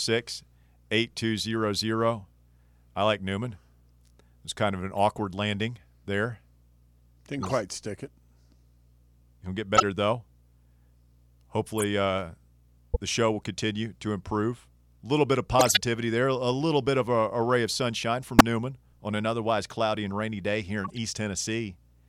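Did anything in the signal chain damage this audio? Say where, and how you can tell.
Yes, at the codec stage: short chirps and noise bursts at 4.93–4.98 s (after "was kind of an"), 7.43–7.52, 9.75–9.83, 11.78–11.84, 12.94–12.97, 15.59–15.81, 18.39–18.41 and 20.84–20.98 s, some quiet, others near full scale. These are corrupt frames decoded: damaged bits were played anyway, spraying energy at wrong frequencies for a frame or several.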